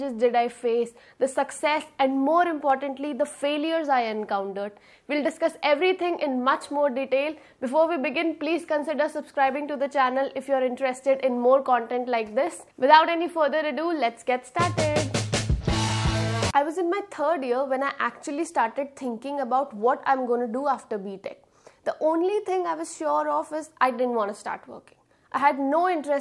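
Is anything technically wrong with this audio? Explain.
No, nothing technically wrong can be heard in this audio. There is no fault to point to anywhere in the clip.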